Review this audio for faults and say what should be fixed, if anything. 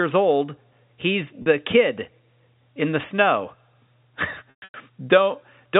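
Packets went missing in two places, and the receiver filled each gap by repeating the last pitch period, a packet loss with pitch repetition. At 1.42 s a 40 ms gap, which fits two 20 ms packets, leaves a brief held, buzzy tone. From 4.50 to 4.74 s about 220 ms is lost in scattered runs up to 120 ms. The repetition fades toward silence before the speech cross-fades back in. The G.711 telephone band is audible but not at fault. A larger jitter buffer, forward error correction or packet redundancy on the network path would prevent these dropouts.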